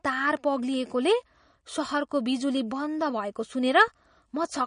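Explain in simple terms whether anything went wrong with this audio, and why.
The speech has a steady fault from start to finish, and its likely cause is MP3 compression. Nothing is heard above about 10.1 kHz, so the crisp top of the sound is missing and s sounds lose their bite. The damage is plainly audible. What marks this as MP3 compression rather than a simple treble filter is that the encoder also drops weaker detail unevenly from moment to moment, giving the speech a watery, unstable texture.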